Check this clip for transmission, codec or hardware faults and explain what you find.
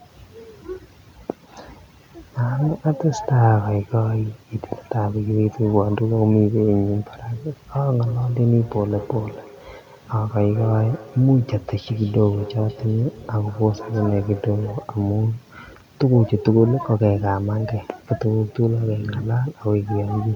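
One fault is present. From 8.06 to 14.94 s there is feedback echo between two devices: a second device replays the speech into an open microphone, so it returns about every fifth of a second, peaking about 17 dB below the voice, seen as evenly spaced fainter copies on the waveform and spectrogram.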